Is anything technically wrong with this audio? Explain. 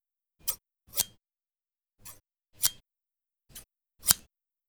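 Yes. From 0.91 to 2.78 s there is channel delay (comb filtering): one channel runs roughly 10 ms behind the other before the two are summed to mono, so shared content cancels at evenly spaced notches starting near 50 Hz, leaving the sound hollow and phasey.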